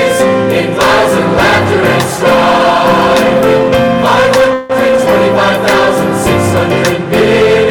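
A harsh fuzz sits on every loud moment throughout: hard clipping, with the signal driven about 13 dB past its limit so a sizeable share of peaks are cut flat. From 4.53 to 4.72 s the sound smears into a fading buzz, then carries on unbroken, likely a call audio freeze where the jitter buffer ran dry and about 162 ms was filled in, leaving everything afterwards that much later.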